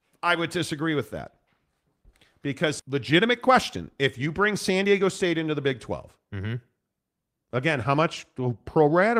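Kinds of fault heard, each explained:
Skip ahead: At about 2.79 to 2.81 s, playback jumps forward, with roughly 0.7 s of speech never heard and nothing inserted to cover the gap. The audio on either side of the jump is spliced almost directly, so the sound lurches abruptly mid-flow. This happens when a stretch of audio is dropped in transit, or discarded by an overflowing jitter buffer, while later audio is already queued. It cuts the playout delay by about the same 0.7 s.
Jitter buffer speed-up: The receiver's buffer held more audio than its target, so it trimmed short pitch-period segments repeatedly to reduce the delay. From 2.89 to 5.75 s the speech runs at 107% speed, losing roughly 0.2 s in total. From 6.18 to 6.54 s it runs at 112%, losing a few tens of milliseconds. Pitch stays the same throughout, but delivery sounds hurried.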